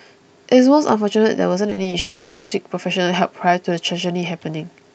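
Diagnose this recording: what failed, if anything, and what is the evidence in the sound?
Choppy, robotic speech from 1.69 to 1.93 s, with four short holes up to 40 ms. This is repeated packet loss at the network stage, with concealment patching about 42% of that span.

From 1.99 to 2.53 s the speech smears into a sustained, fading buzz or hiss with no true silence. This is likely a long network dropout, with the receiver stretching the last sound across a 0.52 s gap.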